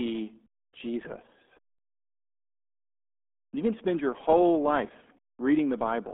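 From start to finish the speech carries heavy RealAudio 14.4 codec damage, with the muffled, gargly smear of a very low-rate dial-up speech coder, which fits an 8 kbit/s stream. A spectrogram shows energy confined to roughly 200 Hz to 3.5 kHz, with nothing above 3.8 kHz.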